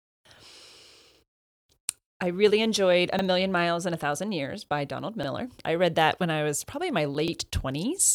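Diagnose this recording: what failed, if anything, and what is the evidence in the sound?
Overlapping chunks in the speech at 1.15–1.19 s, 3.19–3.23 s, 5.23–5.28 s (just before "I read that when") and 7.28–7.32 s (just after "was probably in my"). Each join replays the same 44 ms of audio, heard as a brief stutter recurring every 2 s. The failure sits in buffered or chunked processing: each 2-second block begins before the previous one has finished, so the overlap is played twice.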